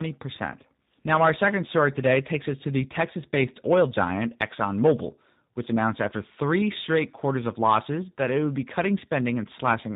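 Tandem speech coding runs through the whole clip. The speech sounds rough, muffled and warbly, with nothing above 3.8 kHz. Two speech coders worked in sequence, the second on the first's damaged output. The sound fits an ADPCM stage followed by a G.729A-type coder.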